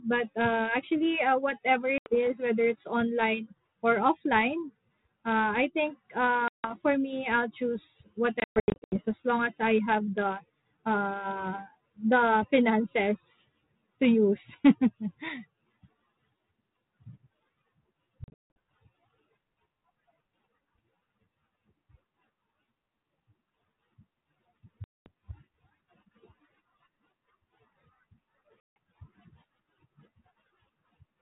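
Speech over what sounds like a 32 kbit/s G.726 ADPCM link, with packet loss at 1.98, 6.48, 8.4, 18.24, 24.84 and 28.6 s. Each is a hard silent hole, choppy around 8.4 s, then slightly distorted speech while the decoder's predictor and step size resync.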